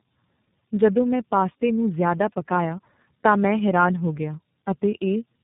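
Throughout, tandem speech coding: the speech was encoded by two low-rate codecs in turn, consistent with AMR-NB then iLBC, so it sounds rough, warbly, and muffled above 3.8 kHz.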